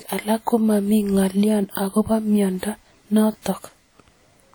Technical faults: WMA compression; pre-echo

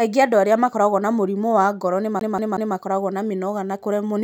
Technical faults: CD stuck on one turn

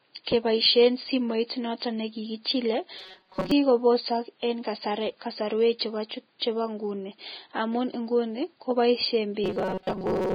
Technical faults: Vorbis compression; pre-echo; robotic sound from repeated short buffers

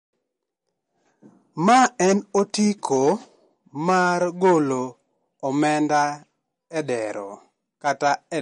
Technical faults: MP3 compression

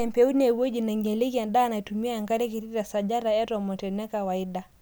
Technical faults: none

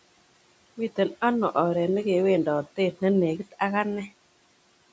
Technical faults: speech cut by the noise suppressor

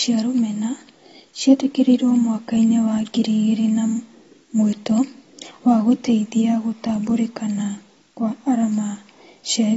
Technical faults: low bit depth with dither; AAC compression

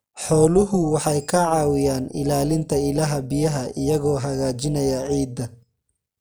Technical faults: overlap-add ripple

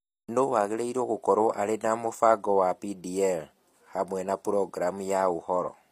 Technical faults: HE-AAC compression

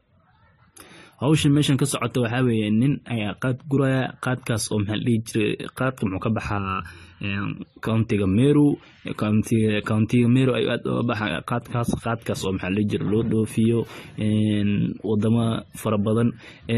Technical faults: transcoding between lossy codecs; channel delay (comb filtering)

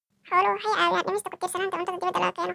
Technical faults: wrong sample rate

